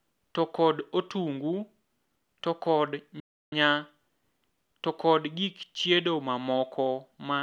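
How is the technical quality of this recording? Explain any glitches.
There's one clear glitch in the speech: a playback stall at 3.2 s. The audio drops to silence for about 320 ms, until roughly 3.52 s, then carries on. That's likely the player running dry of data or its thread getting blocked, so output just stops until it catches up.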